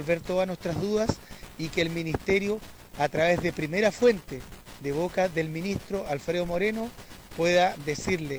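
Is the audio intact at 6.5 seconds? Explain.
Yes, at 6.5 seconds the audio is intact, with no dropout, click, distortion or other fault to be heard at that moment.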